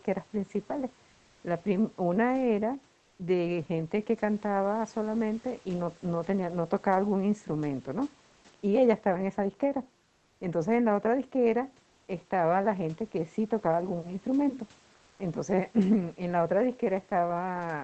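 The sender's voice detector likely stopped transmission during pauses, and the receiver filled each gap with comfort noise in place of the background, at 1.09–1.39 s, 10.03–10.39 s, 11.89–12.07 s and 14.95–15.19 s. Each time the room noise, which sits about 33 dB below the speech, gives way to a flat, featureless hiss. The hiss is about 2 dB quieter, about 6 dB quieter, about 1 dB louder and about 1 dB quieter in turn.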